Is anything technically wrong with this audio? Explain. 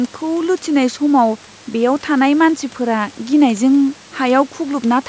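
No, nothing technically wrong stood out on listening; the speech has been through call microphone processing, which leaves nothing above 8 kHz and thins the lowest bass, as that processing normally does.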